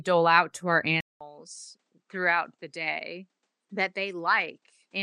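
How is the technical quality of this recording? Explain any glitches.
The quality drops noticeably after the first second. At about 1.01 s there's a 200 ms gap, then the speech comes back roughly 10 dB quieter, duller, with nothing above 9.7 kHz and a faint new noise floor, likely an input switched to a poorer device.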